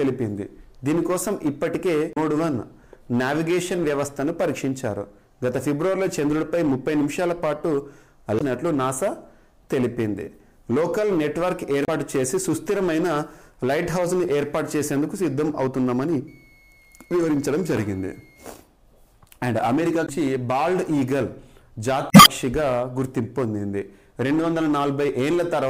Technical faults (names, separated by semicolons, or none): hard clipping; damaged data in a compressed stream; switching supply whistle